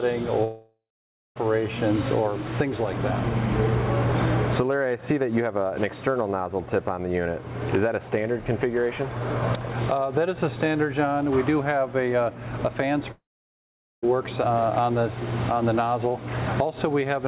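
From 0.44 to 1.38 s, and again from 13.11 to 14.05 s, the sound smears into a fading buzz, then falls silent for about 0.54 s and 0.81 s respectively before resuming with roughly 0.92 s missing. This is likely a long network dropout, with the receiver stretching the last audio.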